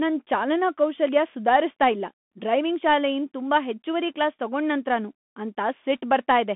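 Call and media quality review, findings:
Bluetooth CVSD headset codec, throughout: speech confined to 200 Hz–3.5 kHz, spectrogram empty above 3.8 kHz; scratchy s sounds, granular hiss floor, slope-overload distortion on loud highs, fits 64 kbps CVSD.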